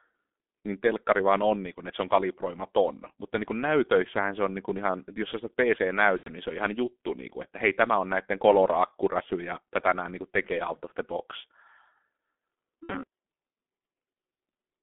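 G.723.1 codec coding runs through the whole clip. The line passes roughly 200 Hz to 3.5 kHz, and the heavy hoarse muffling and smeared consonants point to the 6.3 kbit/s mode, whose 30 ms frames update the vocal model too slowly for fast articulation.

VoIP packet loss concealed by the speech codec occurs at 6.17–6.30 s, just before "niin se on ihan", and at 12.83–12.92 s. The decoder bridges gaps of about 90 ms and 60 ms, fitting three and two lost 30 ms frames, by repeating its last pitch and filter at falling gain. The result is a fading buzzy or noisy smear, and the speech stays weak briefly afterwards.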